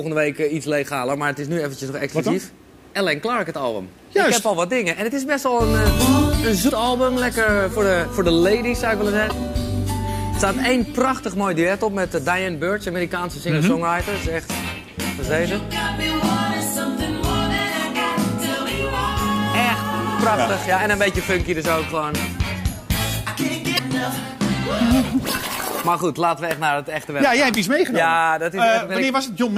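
Damaged data in a compressed stream breaks the audio at 6.66–6.70, 9.28–9.32, 17.56–17.60 and 23.75–23.79 s: corrupted bytes make the decoder misread frames and resync, producing brief glitches.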